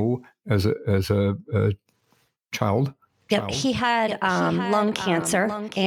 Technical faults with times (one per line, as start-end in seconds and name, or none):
3.28-5.86 doubled audio track